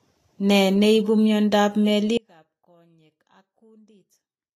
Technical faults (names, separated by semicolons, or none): Vorbis compression; audio dropout to a faint residue